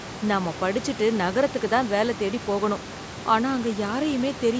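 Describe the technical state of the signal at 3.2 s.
At 3.2 s the speech signal is intact, with nothing wrong beyond the normal call microphone band limit and the room noise sitting about 15 dB below the speech.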